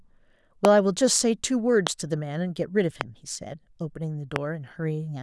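Loud pops hit at 0.65 to 0.67 s, 1.87 to 1.89 s, 3.01 to 3.03 s and 4.36 to 4.38 s. Each is one sharp click, about 20 dB over the speech. The speech runs on beneath. A brief voltage spike is the likely cause.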